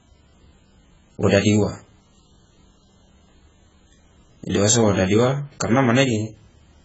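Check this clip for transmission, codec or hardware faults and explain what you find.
One fault runs the whole length of the speech: AAC compression damage, heavy throughout. Nothing reaches above 7.7 kHz, so the top of the spectrum is simply gone and consonants lose their edge. The likely cause is an AAC-LC encoder starved of bits, which fits a rate of around 12 kbps. It quantises each block of frequency lines so coarsely that detail drops out, leaving dull, smeared speech with a warbling, fizzy texture on sustained sounds and sibilants.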